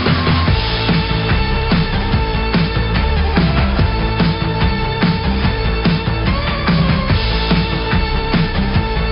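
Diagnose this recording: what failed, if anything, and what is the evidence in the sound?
Nothing failed, and the sound carries no evidence of a fault at any stage of this recording.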